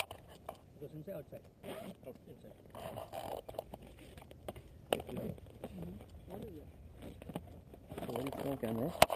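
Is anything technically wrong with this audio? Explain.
No, nothing in this audio sounds technically wrong.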